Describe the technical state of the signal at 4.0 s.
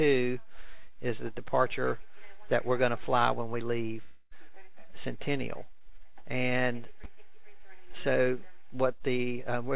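At 4.02 s the signal enters a gap that runs to 4.33 s, likely a long network dropout. For about 0.29 s the receiver extends the last sound as a fading buzz or hiss. About 0.3 s of audio is then lost when playback resumes, still band-limited to 4 kHz by the G.711 call path.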